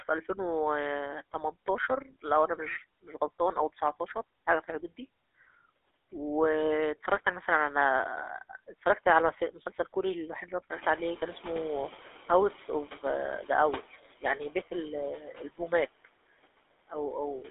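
From start to finish the speech carries noise suppressor artifacts. The background is pulled down by about 19 dB between phrases and swells back under them. On a spectrogram the noise floor appears as patchy, flickering cells that darken around the speech.

The whole clip also shows plainly audible GSM full-rate codec damage. It fits the 13 kbit/s coder, which rebuilds the voice from a vocal-tract model driven by a sparse pulse train. The result is a buzzy, gravelly texture confined to a 300 Hz to 3.6 kHz line band. A spectrogram shows a hard ceiling, with nothing above 3.8 kHz.

Around 10.5 s the room noise jumps by about 16 dB. From 10.7 to 13.84 s the noise suppressor is catching up. Its noise estimate lags, so the louder noise first passes with only about 10 dB of reduction and then sinks over roughly 3.1 s. In the waveform the floor visibly thickens and then tapers down.

Between 15.17 and 15.6 s the suppressor treats part of the speech as noise. 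This is speech cut by the noise suppressor: around a third of a second of sound is dimmed by up to about 12 dB, so it comes across as swallowed. The spectrogram shows the speech energy thinning and fading there, and the waveform shows a dip in the envelope.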